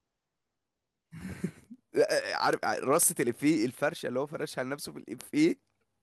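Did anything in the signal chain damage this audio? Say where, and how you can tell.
Yes. Word clock ticks run through the speech from 0.16 to 6.0 s. They are sharp and of uneven strength, roughly ten per second, about seventy in all. The digital link was read on an unlocked clock. Each slip drops or repeats one sample. That rate fits a mismatch of around 200 ppm.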